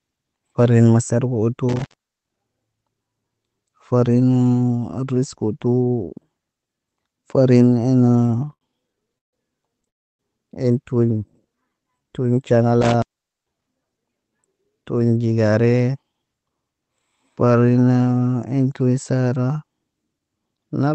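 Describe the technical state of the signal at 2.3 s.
An intermittent contact spans 1.69 to 2.40 s, after "masarif utu". A loose connection opens for 0.41 s. Sound cuts out, with crackle at the edges and faint hiss.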